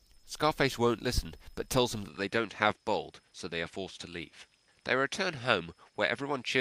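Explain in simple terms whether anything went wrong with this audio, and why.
Yes. At about 2.08 s the recording most likely switched its input to a poorer device, a different microphone or a headset in call mode, and the rest of the clip comes through it. That device cuts off everything above about 11.4 kHz, so from that moment the sound loses its top-end sparkle and turns duller. There's no gap at the switch and the loudness stays about the same, but a new, quiet background noise comes in underneath.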